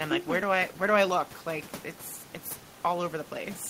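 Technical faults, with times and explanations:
No technical faults can be heard anywhere in the recording. A room noise sits in the background, about 22 dB below the speech, and belongs to the space where the microphone was placed.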